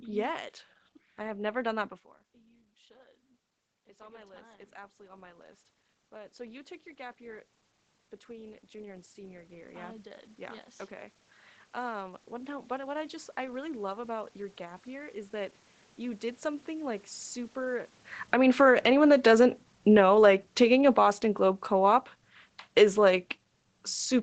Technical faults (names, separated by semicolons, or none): automatic gain rising; automatic gain falling